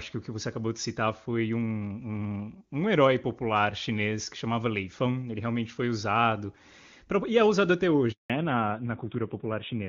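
At 8.12 s, right after "e é usado até", a handover gap cuts the speech for 180 ms: the voice fades within milliseconds into true silence, not the smeared, buzzy fill of packet-loss concealment. From 8.30 s to the end, the call falls back to narrowband. Everything above 4 kHz disappears and the voice turns dull and rasp, which fits a low-rate narrowband codec. The raspy texture sets it apart from a plain low-pass filter, and it contrasts with the clean HD Voice before the switch.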